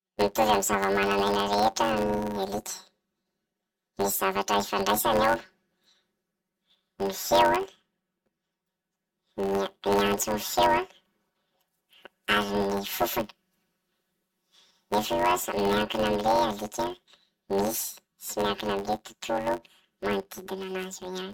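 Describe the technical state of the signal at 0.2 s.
At 0.2 s the speech is affected by planar audio read as interleaved, a fault present throughout the clip. Each block of about 10.67 ms, which fits a 512-sample block, holds all of one channel's samples followed by all of the other's, but it is read as alternating left-right pairs. Each channel's half therefore plays at double speed across both outputs in turn. With blocks this short, the result is a robotic buzz at about 93.8 Hz rather than an audible octave jump.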